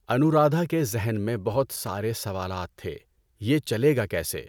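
Loose connector crackle runs from 1.73 to 1.88 s, a burst of about 0.14 s. A worn or dirty contact in the signal path is making and breaking rapidly, chopping the speech into fragments, heard as a brief irregular scratching crackle.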